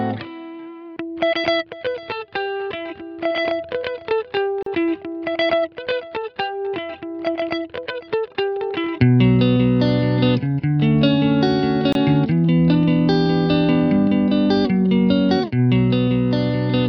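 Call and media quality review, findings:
Brief dropout to silence at 4.63 s, about 37 ms, edges smeared; sound resumes where it stopped. Gap at a join of encoded pieces: separately encoded segments concatenated untrimmed, so encoder start delay and final-frame padding remain.

Same symptom at 11.93 s, about 27 ms hole with smeared edges, continuity otherwise unbroken across it. Probable component: segment concatenation stage, missing priming and padding trim at the splice.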